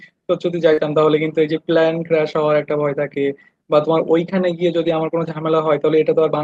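Right at the start, from 0.73 to 0.79 s, you get a short concealed packet loss. About 40 ms of audio didn't arrive in time, so the receiver extended the last bit of sound to cover the gap before blending back into the real signal. It comes across as a quick smear or wobble, and anything short in that spot can get swallowed. In the last 20 ms of that stretch, 0.77 to 0.79 s, the decoder switches to a lost packet rebuilt from error correction. The packet that followed carried a low-rate copy, and that copy was played instead of more guesswork, so that tail sounds rougher.

The same thing happens again from 2.31 to 2.37 s, where about 40 ms is rebuilt from error correction. That's consistent with a couple of 20 ms frames. There's no gap, just a brief grainy, noisier patch. The longest one runs from 4.77 to 4.91 s. About 80 ms is rebuilt there, which sounds like roughly four frames in a row. 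The texture coarsens there before the normal Opus audio comes back. Throughout the clip, that Opus audio tops out at 12 kHz.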